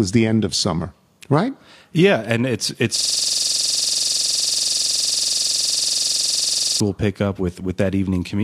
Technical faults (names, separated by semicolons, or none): system hang loop